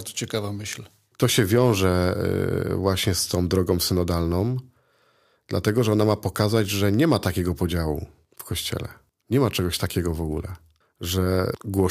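Hard clipping appears from 1.23 to 1.86 s, just after "ciekawa myśl". The speech peaks exceed what the signal path can carry by about 3 dB. They are cut flat and crackle on the peaks. It recurs from 7.12 to 7.27 s, between "że nie" and "podziału w kościele".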